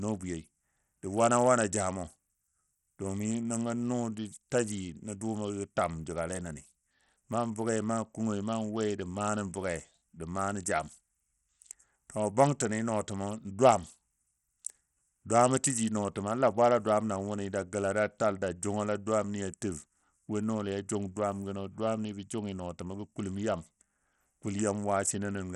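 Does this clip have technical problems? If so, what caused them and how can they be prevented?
Yes. Throughout the speech, the treble flickers and gritty, aliased grain rides on it. This is likely Bluetooth SBC compression with a starved bit pool, which fits about 64 kbps. A spectrogram shows patchy upper sub-bands and nothing above 16.6 kHz. A wired link or better Bluetooth codec prevents this.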